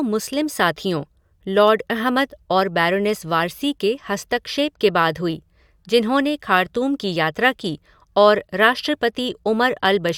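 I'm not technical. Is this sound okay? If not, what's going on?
Yes, the recording comes through as one steady, unbroken signal, with nothing technical getting in the way of the speech.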